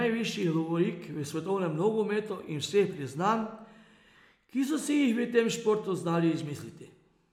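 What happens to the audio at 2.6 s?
Nothing goes wrong at 2.6 s; the speech carries on intact through that moment, with no dropout, click or distortion to be heard.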